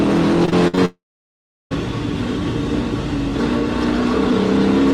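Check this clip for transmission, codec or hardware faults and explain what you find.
Yes, there are two transmission faults, both early in the clip.

From 0.45 to 0.79 s there is repeated packet loss (robotic sound). Four short holes appear, the longest 57 ms. Each is patched by extending the previous sound. About 35% of that stretch is concealed, so it sounds choppy, with pieces missing.

From 0.85 to 1.73 s the audio stops arriving. The last sound is carried on briefly and fades, then about 0.71 s of silence follows. The audio resumes without the lost part. This is likely a long network dropout.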